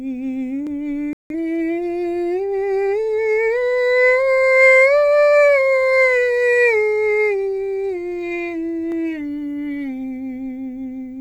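A digital broadcast dropout from 1.13 to 1.35 s mutes this music clip when the receiver loses corrupted frames, and the roughly 170 ms of lost audio fits about four lost frames.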